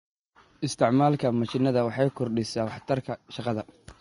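Vorbis compression, throughout: the likely cause of the plainly audible grainy hiss in this speech, at a rate that fits about 30 kbps. The cut-off is lowered, and the remaining treble is quantised so coarsely that its detail becomes noise, roughening tones and blurring attacks.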